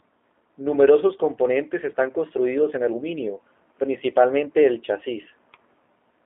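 G.729 codec damage runs through the whole clip, from start to finish. The speech has been squeezed into a narrow line band of roughly 250 Hz to 3.5 kHz, and rebuilt by a low-rate predictive coder whose character points to G.729A at 8 kbit/s. Each short frame is modelled from a vocal tract filter, a pitch predictor and a sparse set of pulses, so the speech stays intelligible but comes out plainly rough, buzzy and synthetic, thin and without any top end.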